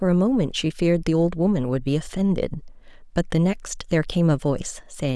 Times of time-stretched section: none

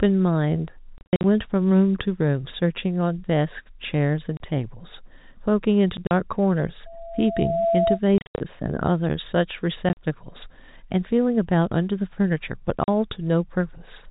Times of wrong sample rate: none

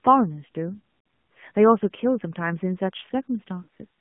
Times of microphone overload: none

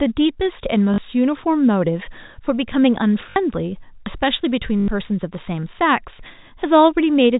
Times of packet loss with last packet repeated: 0.94-0.98, 3.30-3.36, 4.80-4.88

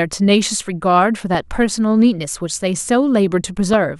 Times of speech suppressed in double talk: none

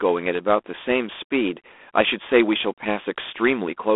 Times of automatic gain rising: none

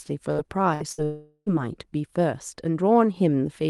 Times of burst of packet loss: 0.31-0.41, 0.74-1.01

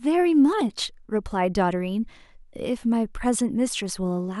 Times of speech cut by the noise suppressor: none

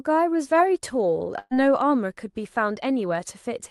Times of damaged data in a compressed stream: none

